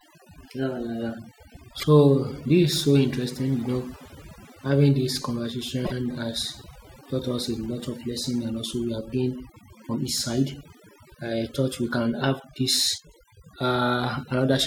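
From start to finish, overdone noise removal is at work: a noise reduction stage set far too aggressively pulls individual frequency bands down to nothing whenever they sit close to its noise estimate, and the softer parts of the speech are removed along with the hiss. The result is a background reduced to near silence dotted with twinkling specks.

At 1.79 s there are repeated frames: a 26.1 ms block, which fits a single compressed frame, is decoded and played twice in a row, adding about 26 ms and producing a brief stutter. At 5.84 s the same fault recurs, with one 26.1 ms block played three times, adding about 52 ms and making a longer stutter.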